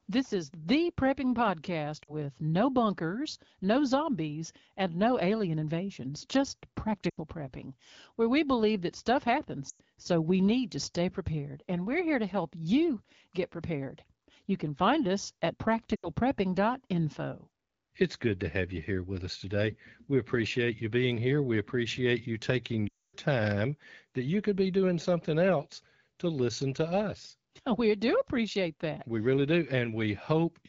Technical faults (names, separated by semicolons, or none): lost AMR speech frames